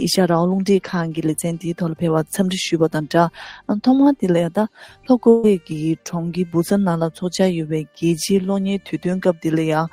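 At 5.29 s there's a burst of packet loss running to about 5.45 s. Roughly 140 ms of audio never arrived, so the receiver stretched the last bit it had, fading it down, and then picked up again with that stretch simply gone.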